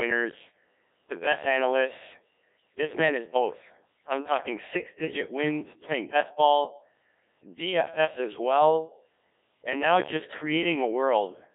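Throughout, the speech sounds robotic and buzzy, with nothing above 3.6 kHz. That is heavy Codec 2 vocoder damage, which fits a bitrate near 1.3 kbit/s and resynthesises the voice from sine waves.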